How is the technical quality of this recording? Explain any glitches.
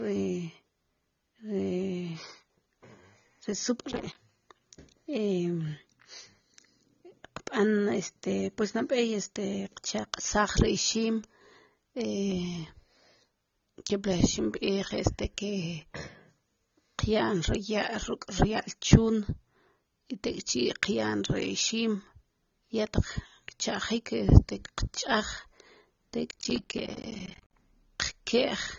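Technical quality is poor, with two glitches and dull audio throughout.

Processor overload crackle, 3.91–4.15 s and 26.31–27.53 s: missed deadlines on buffers of roughly 10 ms leave many short silent gaps, heard as gritty crackle, the second burst much longer.

AAC compression, throughout: nothing remains above 7 kHz, and the speech sounds dull and smeared, likely AAC-LC at a low bitrate around 24 kbps.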